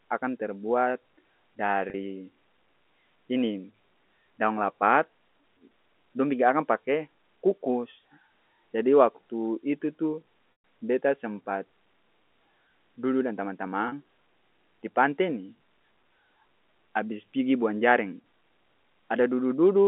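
At 1.9 s and again at 13.88 s, just after "dudu dan", there is packet loss with pitch repetition: about 40 ms of audio went missing each time, which fits two 20 ms packets, and the receiver filled it by repeating the last pitch period, so the sound briefly holds with a buzzy sustain. At 10.52 to 10.64 s, between "jadi waktu itu tu" and "beta sempat", a 120 ms gap repeats, fades to silence, then cross-fades back. Unlike a hard dropout, no abrupt silence or click appears.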